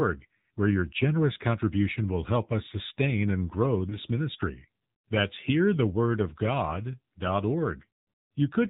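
Throughout, the speech carries the AMR narrowband mobile codec sound. Nothing passes above 4 kHz, and the voice is plainly buzzy and synthetic, which fits a low AMR-NB mode around 7.4 kbps, where too few pulses per subframe are left to model the vocal tract excitation.

From 3.90 to 3.98 s, just after "us sustain and grow", there is a short dip and warble from lost AMR speech frames. It sounds like a single 20 ms frame failed its checksum, and the decoder filled the gap by repeating the previous pitch and vocal tract settings at reduced gain.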